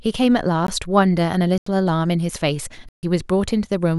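Speech, with three blocks of digital silence. The audio drops abruptly to silence and returns with no fade. At 0.67 s a 16 ms block is heard as a tick. From 1.58 to 1.66 s an 85 ms hole fits a 4096-sample buffer left empty. From 2.89 to 3.03 s a 142 ms gap cuts the speech.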